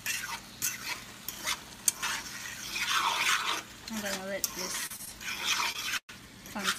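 The audio has four short stalls from late packets at 4.86, 4.96, 5.05 and 5.72 s, each holding the last sound 17 to 39 ms while the jitter buffer ran empty, seen as smeared, repeated spectrogram frames. A call audio freeze at 5.98–6.10 s stretches sound into a fading buzz, then 70 ms of flat-line silence, likely from packets held up in transit.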